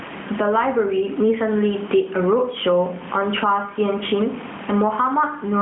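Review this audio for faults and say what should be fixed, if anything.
Gain pumping runs through the whole clip, a swing of something like 20 dB, so loud and quiet parts end up squashed together. The likely cause is mic gain set far too hot, with a fast limiter or compressor clamping every peak. Turn the input gain down and slow the limiter so it only catches the odd stray peak.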